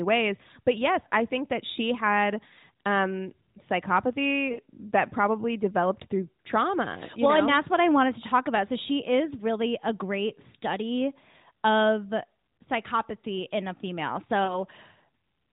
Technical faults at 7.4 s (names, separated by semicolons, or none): none